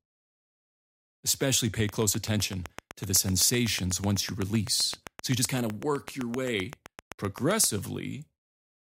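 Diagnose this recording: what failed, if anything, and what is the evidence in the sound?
A train of clicks runs through the speech from 1.89 s to 7.65 s. About fifty near-identical pulses tick at a steady 7.8 per second. They peak roughly 10 dB above the speech and sit on top of pauses as well as speech. That regular spacing and constant shape point away from the source. The likely cause is interference coupling into the analogue wiring, or a struggling interface injecting a repeating pulse into the signal path.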